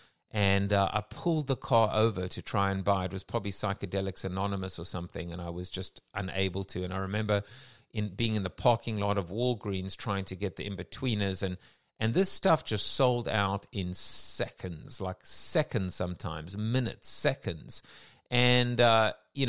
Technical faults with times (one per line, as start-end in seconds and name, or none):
none